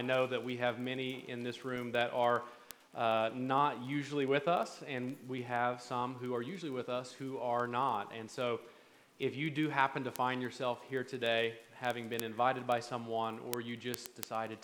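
Word clock ticks run through the sound from 0.15 s to 14.58 s, a steady train of short clicks about every 0.05 s, roughly twenty a second. Each tick marks a single sample dropped or repeated where a receiver on its own clock slips past the sender's, a mismatch of around 400 ppm. The unbroken, even spacing is what separates this from random digital clicks or packet dropouts, which fall irregularly.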